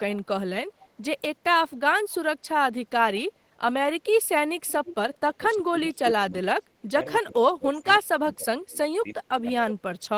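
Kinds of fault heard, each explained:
Echo leak: A faint delayed copy of the speech returns about 328 ms after the original, most likely because a loudspeaker on the far end fed the microphone and its echo canceller let part of it through. It surfaces briefly at 0.79 to 0.88 s, very quiet at around 30 dB below the speech, then more clearly at 4.66 to 4.95 s, about 15 dB down. On a spectrogram it shows as a weaker, time-shifted repeat of the preceding harmonic pattern.
Speech suppressed in double talk: While the other side is also talking, the speech sinks in level, likely because an echo canceller could not tell this talker from its loudspeaker echo and attenuated both. It happens from 5.36 to 7.0 s and again from 7.21 to 9.55 s, with the deepest dips reaching roughly 25 dB. On a waveform the envelope caves in, and a spectrogram shows the energy thinning in patches.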